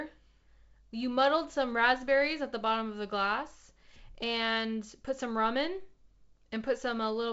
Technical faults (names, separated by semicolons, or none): none